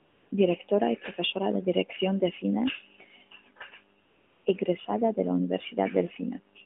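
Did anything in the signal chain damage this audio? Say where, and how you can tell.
Yes. The damage is AMR comfort noise, added in the codec stage of a mobile call. From the start to 0.32 s, and again from 4.04 to 4.46 s, the real background drops out. A smooth, steady hiss replaces it, then the true background switches back. The sending side judged the line silent and stopped sending speech frames. The receiver filled each gap with synthetic noise built from a coarse level and spectrum.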